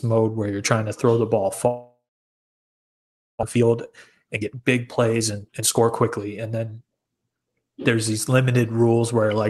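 Right after "to throw the ball", at 1.67 s, the sound stops and the gap runs to 3.43 s. A brief fading buzz or hiss carries on, then about 1.4 s of silence. That's most likely a long network dropout. About a second of speech never comes back.

From 3.45 s to 7.09 s you get a jitter buffer speed-up. The receiver is draining the backlog of roughly 0.7 s that built up behind the gap by snipping out tiny pitch-period slices. The speech runs about 19% fast at normal pitch and sounds rushed.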